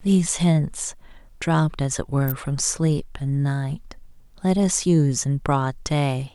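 At 2.28 s an electrical switching spike cuts through the speech: a sharp snap lasting until about 2.32 s, heard as a tight burst of clicks sitting on top of the sound rather than replacing it. It peaks at roughly -15 dBFS. The likely cause is a nearby switch, motor or static discharge arcing briefly, with the audio line picking up that interference as a short impulsive transient.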